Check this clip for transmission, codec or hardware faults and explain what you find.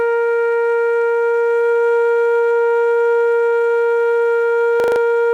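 One fault shows up in this music clip, a system hang loop from 4.8 to 5.0 s. The machine or its audio driver stalled while the sound hardware kept replaying the same 40 ms stretch of its ring buffer, five times over. At 25 repeats per second that comes across as a hard, buzzy stutter rather than a clean tone. Unlike a dropout or underrun, there is no silent gap and almost nothing is skipped. The fragment simply repeats identically instead of fading or smearing.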